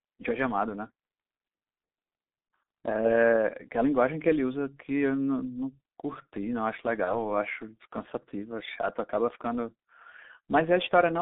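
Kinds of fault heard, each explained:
G.723.1 codec: This is the old low-rate internet-telephony codec, and it's all over the speech. Everything sits inside a narrow band from about 200 Hz up to 3.7 kHz, so the voice comes across muffled and thin. The damage is heavy: there's a hoarse, rough texture and consonants smear together, which fits a bitrate of around 6.3 kbit/s and a codec whose 30 ms frames can't track fast changes in the voice.
VoIP packet loss concealed by the speech codec: Around 7.04 s a packet drops out, about 30 ms of audio, which fits a single lost codec frame. The decoder fills the gap by extending its last pitch and filter settings while turning the level down, so you hear a short stretched, fading sound. Because each frame is built on the one before, the speech stays weak or distorted until roughly 7.22 s, well after the gap itself.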